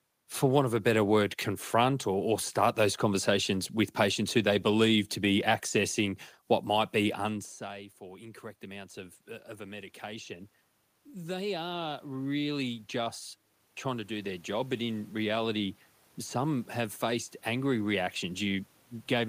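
Just after "accessing what might be", around 7 s, the talker moves off the microphone and the level falls by about 21 dB. From 7.21 to 13.28 s the automatic gain rises, climbing about 13 dB over six seconds to compensate. A second, smaller rise of about 4 dB follows from 13.83 to 17.97 s. Unlike a talker drifting closer, these slow swells lift the room noise together with the voice.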